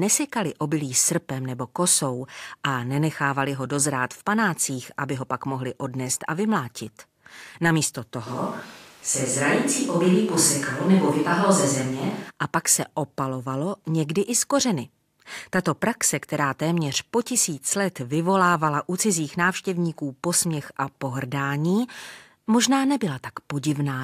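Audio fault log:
8.28–12.29 s, switch to a distant microphone: for about four seconds the speech turns roomy and hollow, losing its low end, and then snaps back just before "a pak se opalovalo". The likely cause is that the close microphone dropped out and a farther pickup carried the sound. Loudness stays roughly the same, while room noise sits about 30 dB below the speech. On a spectrogram the bass thins and reverberant smearing blurs word edges, with abrupt boundaries; the waveform's envelope looks less peaky.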